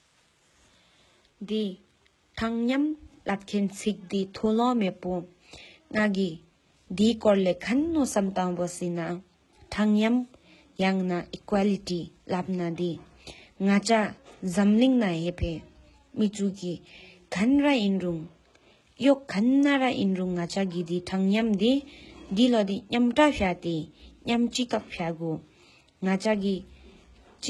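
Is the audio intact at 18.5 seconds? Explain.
No. At 18.5 seconds the speech carries the heavy damage of HE-AAC compression that runs through the whole clip, likely at a very low bitrate around 16 kbps. Only the lower spectrum is truly coded; the treble is synthesised by copying lower bands upward under a coarse envelope, and nothing reaches above about 11.8 kHz. Because the rebuilt harmonics don't align with the real ones, s sounds come out gritty, metallic or lispy.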